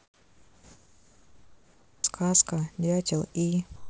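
A speech recording, band-limited with nothing above 8 kHz, opens with a flat, featureless hiss from 0 to 2.04 s, about 15 dB quieter than the background that follows. The same steady hiss returns from 3.76 to 3.90 s, this time only about 2 dB lower. This is comfort noise in place of the background, likely from discontinuous transmission: while the sender's voice detector heard no speech, the receiver substituted synthetic noise for the real room sound. At 1.99 s the speech starts abruptly, its first 50 ms missing. This is an onset clipped by the voice detector, likely because it reacted late and comfort noise filled the gap until 2.04 s.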